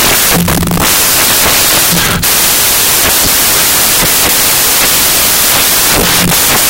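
From start to finish, the speech carries loud, harsh broadband noise. This is the sign of samples built from the wrong bytes. The reader assembles each sample incorrectly, with bytes swapped or misaligned. The busy low-order bits end up as the large part of every value. The result is a dense, broadband roar.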